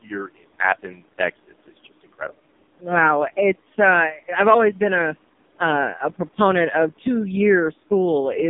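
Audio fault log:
Throughout, AMR narrowband mobile codec: the sound is squeezed into a telephone band of roughly 200 Hz to 3.7 kHz, with nothing above 3.6 kHz. The very low bitrate, which fits the 4.75 kbps mode, leaves heavy buzzy, synthetic coding damage, as a few pulses per frame drive the vocal-tract model.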